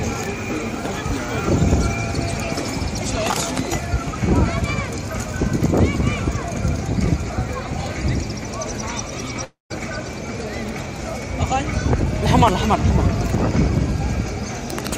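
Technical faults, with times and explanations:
9.44–9.72 s, long network dropout: audio likely stopped arriving; the last sound smears into a fading buzz, then 150 ms flat silence on the waveform.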